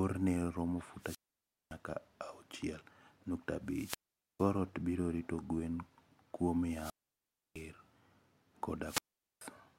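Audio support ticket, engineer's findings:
Wireless microphone squelch dropout, four events: 0.99–1.77 s, 3.66–4.54 s (before "ot biro rito gwen"), 6.64–7.69 s (after "biro rito gwen kuom"), 8.83–9.46 s. Each has a hiss swell, then a near-silent hole of 0.56, 0.45, 0.66 and 0.43 s, then speech returns. The fault is in the RF link. FM carrier fades and the receiver squelch closes, muting output until the signal recovers.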